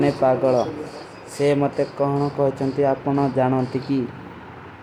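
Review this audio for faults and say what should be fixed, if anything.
Nothing in this audio needs to be fixed.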